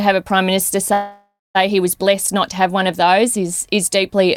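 At 0.93 s the sound stalls: the last moment is stretched into a fading buzz that sinks to silence for about 180 ms, and the audio resumes at 1.57 s exactly where it left off, with nothing skipped. This is a call audio freeze. The likely cause is packets held up in transit until the jitter buffer ran dry, so the receiver filled roughly 615 ms and everything after arrives that much later.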